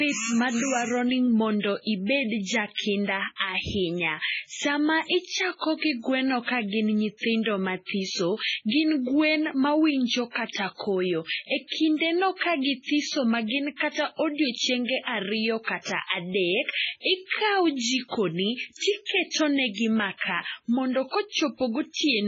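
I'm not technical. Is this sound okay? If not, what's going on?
No. The speech has heavy damage from MP3 compression, most likely squeezed into a very small file. It runs through the whole clip. The high, crisp part of the sound is cut off, with nothing above 7.6 kHz, so it sounds dull and muffled. The encoder also drops quiet details that flicker on and off. That gives a watery, swirly quality, with metallic chirps on s sounds and blurred starts to sounds.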